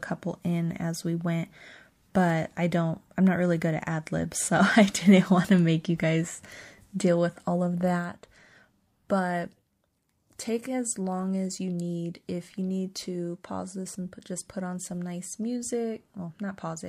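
No technical faults are audible.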